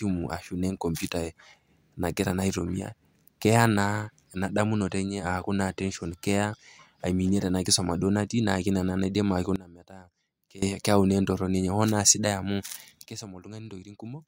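At 9.56 s the speech and its background noise drop together by about 20 dB in a single step, holding there until 10.62 s before returning. A second sudden gain jump follows at 13.06 s, cutting the level by about 14 dB through the end of the audio. The likely cause is a digital gain setting or bit shift applied instantly, with no ramp, so the level changes between adjacent samples.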